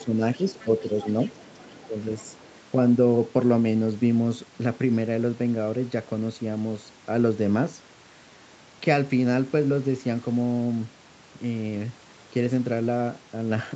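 When both ends of the call talked at once, the echo canceller likely could not tell the talker from the loudspeaker echo and turned everything down. This is speech suppressed in double talk: the voice dips by around 10 dB at 0.0–0.2 s, 0.38–0.43 s and 0.64–0.7 s, and by around 15 dB at 1.71–2.05 s. Partly overlapping these dips, the other side's voice leaks through at 0.58–0.81 s, 1.01–1.75 s and 2.18–2.6 s, a faint second voice roughly 20 to 30 dB below the talker. The echo canceller likely failed to strip all of the loudspeaker sound from the microphone.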